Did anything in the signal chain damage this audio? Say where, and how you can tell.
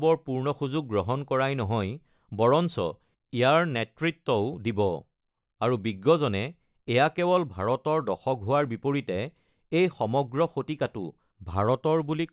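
No, nothing in the signal chain damaged this audio.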